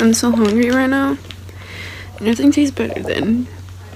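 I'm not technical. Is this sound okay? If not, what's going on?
Yes, nothing in this sound stood out as a problem when I listened to it.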